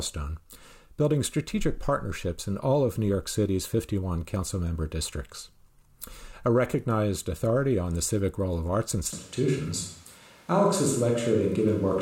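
The close microphone's feed most likely dropped out at 9.13 s, just after "civic role of arts", leaving the recording on a microphone further from the talker for the rest of the clip. This switch to a distant microphone is abrupt: the speech turns roomy and hollow at once, with thinner low end, while its loudness stays about the same. A faint bed of room noise, roughly 35 dB below the speech, also comes up.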